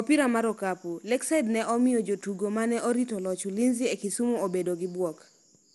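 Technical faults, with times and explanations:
Throughout, generation loss: the speech has a swirly, smeared, hollow quality beyond what a single lossy encode at this rate would leave, with consonant attacks blurred and nothing present above about 11.9 kHz. The texture points to MP2 at about 96 kbit/s, most likely re-encoded around five times in succession, each pass requantising on a shifted frame grid so that noise accumulates rather than cancels.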